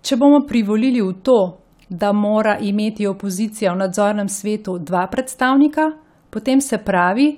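Speech recording; no technical faults can be heard.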